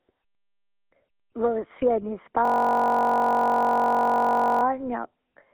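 A speech recording carried through a GSM full-rate codec for its whole length, consistent with the 13 kbps first-generation GSM coder. Nothing is heard above 3.8 kHz, the line band sits at roughly 200 Hz to 3.4 kHz, and the pulse-train excitation leaves a plainly audible buzzy, gravelly roughness on the speech. From 2.45 to 4.63 s a system hang loop takes over: a single 21.33 ms fragment, which fits a 1024-sample buffer, repeats about a hundred times, giving a steady 46.9 Hz buzz while the playback hardware cycles one buffer during the freeze.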